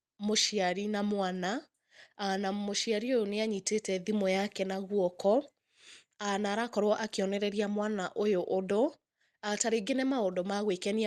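A speech recording with no technical faults to be heard. It has come over a WebRTC call path working normally, with the top end stopping at about 12 kHz, which fits an Opus codec at around 40 kbps.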